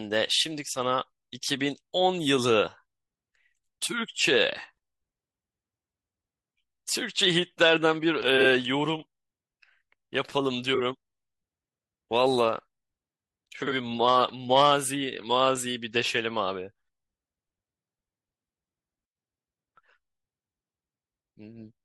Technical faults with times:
8.40-8.45 frames out of order
10.75-10.80 frames out of order
13.62-13.72 frames out of order
15.55 frames out of order

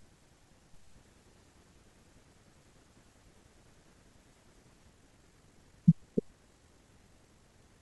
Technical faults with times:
4.88-7.82 time-stretched section

